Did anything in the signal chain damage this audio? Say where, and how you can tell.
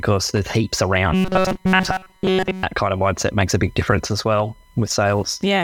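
Yes. There's USB whine throughout, a steady 1 kHz tone about 40 dB under the speech. The bus's 1 ms frames are leaking into the analogue side through power or ground.

From 1.13 to 2.63 s the speech turns into a robotic, metallic buzz at 188 Hz. That's likely the driver or buffer repeating roughly 5 ms chunks in place of most of the real audio.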